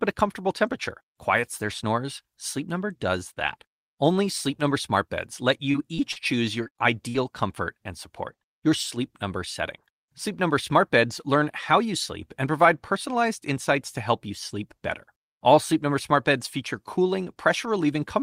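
Short concealed packet loss occurs at 5.71, 5.96, 6.12, 6.64 and 6.68 s. Each 20 to 40 ms gap is filled by extending the preceding speech, leaving brief smears. A burst of packet loss at 7.09 to 7.16 s drops about 60 ms. The decoder holds and fades the last sound before resuming later.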